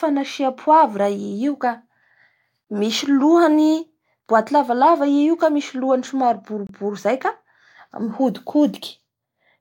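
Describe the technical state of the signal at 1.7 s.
At 1.7 s the speech signal is intact, with no audible technical fault at that moment.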